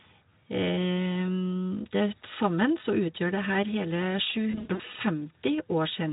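From 4.51 to 4.81 s the speech breaks up with VoIP packet loss concealed by the speech codec. About 200 ms of audio is missing, scattered over roughly 280 ms, consistent with around ten 20 ms frames of the light-damage Speex stream. The decoder extrapolates its last pitch and filter, so the speech smears into a buzzy tone or coloured noise that fades, with the longest gap near 100 ms. A spectrogram shows frozen harmonics and flattened detail, and the waveform shows decaying envelopes.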